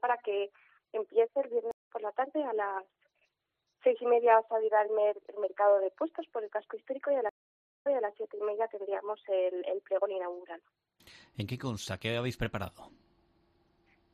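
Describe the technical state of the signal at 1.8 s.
At 1.8 s a stream reconnect leaves dead silence from 1.71 to 1.88 s while a fresh decoder restarts. Audio resumes roughly 150 ms further on. Flat waveform, blank spectrogram column.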